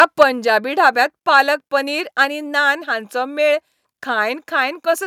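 From the very start of the speech to 0.23 s, the loudest syllables carry a harsh, crackling edge, with the tops of the peaks flattened off. This is microphone overload. The input level was likely set so high that the peaks ran about 4 dB past the converter's limit, so the waveform tops are cut away. Around 3 percent of the samples in that opening stretch are clipped, enough to add the gritty distortion on each loud burst.

Right after that distorted opening, at 0.23 s, the speech and the background behind it drop together in one sudden step of about 4 dB. A second, smaller drop of about 2 dB follows at 1.23 s. These are microphone volume stepped down events. The call software likely reacted to the overloaded input by cutting the device's input volume in two discrete steps, so the whole level falls at once rather than fading gradually.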